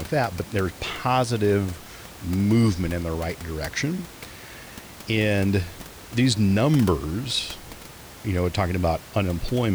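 Nothing stood out on listening to this speech, with only a room noise sitting about 19 dB beneath it.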